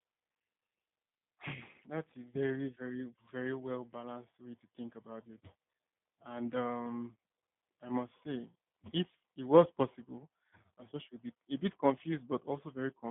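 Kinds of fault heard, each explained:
G.729 codec: a low-rate VoIP coder rebuilds the speech frame by frame from a vocal tract filter, a pitch predictor and a few pulses, so it comes through intelligible but plainly rough and faintly synthetic, consistent with an 8 kbit/s coder. The line band runs from about 150 Hz to 3.6 kHz. On a spectrogram nothing appears above 3.8 kHz, a flat ceiling across the clip, and the harmonics below it look smeared and blocky.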